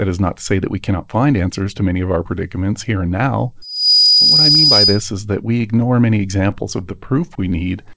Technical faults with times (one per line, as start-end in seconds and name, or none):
3.62-5.08 loudspeaker feedback squeal
5.62-6.84 scattered short gaps
6.89-7.53 jitter buffer slow-down